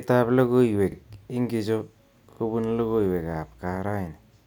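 At 0.92 s, and at 2.32 s between "logoiwek ingitcho" and "logoiwek ab", a repeated buffer occurs: late audio made the device replay a 40 ms slice once, then twice. It gives hard-joined stutters with no sound lost, unlike a dropout's gap.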